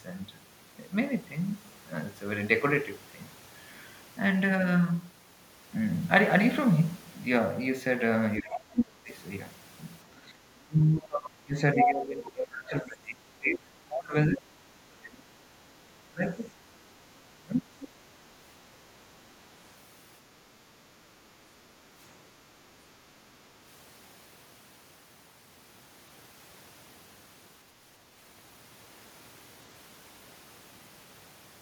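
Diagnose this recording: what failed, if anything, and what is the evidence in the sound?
The speech, processed in the call chain, is pulled down hard from 8.39 to 9.11 s, through most of 10.11 to 16.44 s, and from 17.42 to 17.86 s, by around 25 dB at worst. This is speech suppressed in double talk, likely because the echo canceller mistook near speech for echo. It differs from a network dropout because the level dips rather than going silent.

A second voice comes through at 8.52 to 8.84 s and 11.78 to 11.93 s at roughly the same level as the speech, and briefly at 17.82 to 17.87 s about 20 dB lower. This is the other side's voice leaking through, likely loudspeaker echo the canceller failed to subtract. It is distinct from crosstalk in wiring because it coincides with the suppression episodes.

The room background, in the same call-processing stage, drops by about 6 dB from 16.76 to 17.14 s and again from 18.12 to 18.24 s, then recovers. 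This is background gated by the echo canceller while the loudspeaker played. Unlike noise suppression pumping, it tracks far-end activity, not the talker's own pauses.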